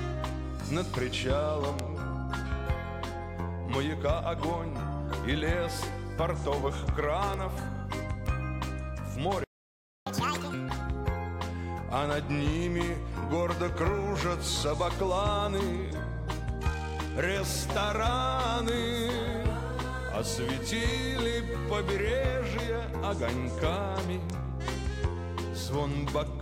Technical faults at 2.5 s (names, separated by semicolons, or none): none